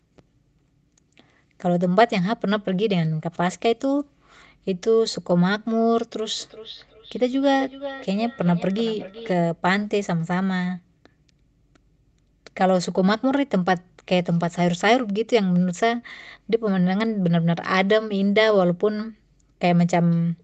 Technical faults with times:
6.40-9.35 feedback echo between two devices

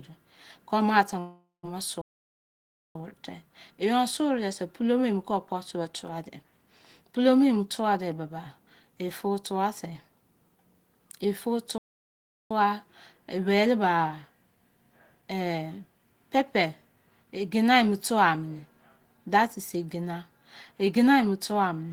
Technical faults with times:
1.19-1.72 long network dropout
2.01-2.95 playback stall
3.19-3.86 jitter buffer speed-up
11.78-12.51 playback stall

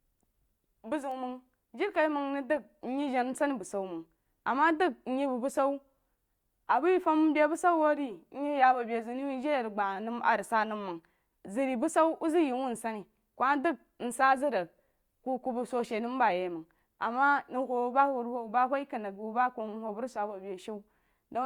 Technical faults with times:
1.11 bit error spike

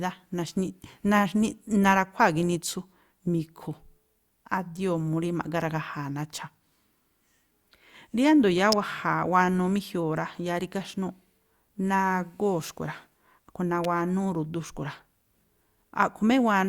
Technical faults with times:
8.72 electrical switching spike
13.84 electrical switching spike

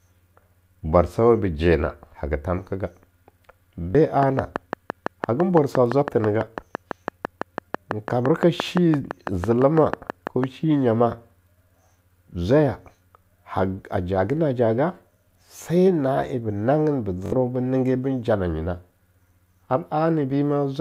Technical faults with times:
3.90-3.95 repeated buffer
4.23-10.45 train of clicks
15.64-15.66 repeated buffer
17.26-17.32 repeated buffer

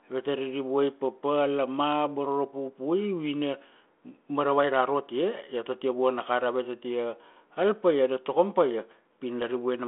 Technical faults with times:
none

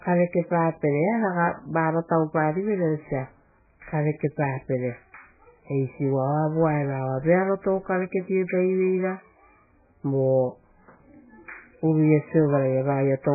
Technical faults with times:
0.00-13.35 MP3 compression

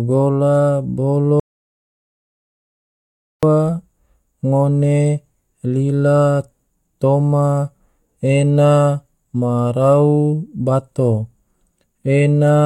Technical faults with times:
1.40-3.43 audio dropout to silence

